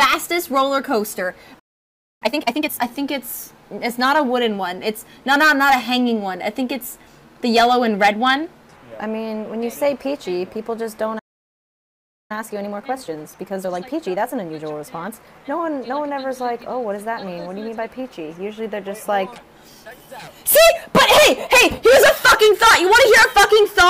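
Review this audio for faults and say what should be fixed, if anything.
Playback stall at 1.59–2.22 s (0.62 s) and 11.18–12.31 s (1.11 s): the sound drops to silence mid-flow, likely because the player ran out of buffered data or its thread was blocked.

Time-compressed catch-up at 2.22–2.82 s (2x speed) and 12.31–15.31 s (1.25x): after each stall, the player trims its backlog by splicing out small pieces, so the audio rushes at unchanged pitch.

To prevent both, enlarge the playback buffer and keep the audio thread free of blocking work, so the output never starves and has no backlog to catch up on.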